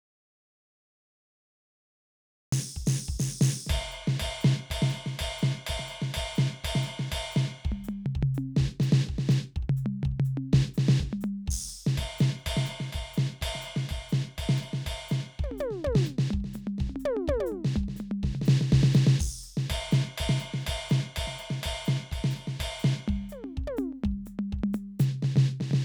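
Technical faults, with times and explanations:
0.00–2.52 s, audio dropout to silence: the music opens cut out, with a flat waveform, an empty spectrogram and no room tone, likely from a lost input, before resuming abruptly.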